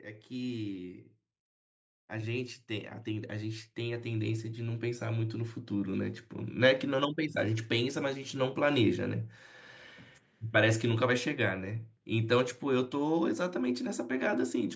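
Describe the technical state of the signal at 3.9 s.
At 3.9 s the automatic gain control is partway through rising: having judged the input too quiet, it is raising its gain step by step from 2.08 s to 5.64 s, by about 10 dB in all. The speech and the background noise swell together as a result.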